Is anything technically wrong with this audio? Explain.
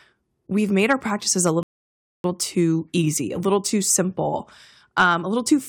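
Yes, there are two kinds of fault in this speech. Hard clipping occurs from 0.79 to 0.93 s and from 4.98 to 5.10 s. Peaks overdrive a stage by about 3 dB and then about 5 dB, get sliced flat, and add harsh crackly upper harmonics. A rebuffering stall at 1.63 s drops the audio to silence until 2.24 s. The player starved for data, then resumed exactly where it stopped, adding 0.61 s without losing any material.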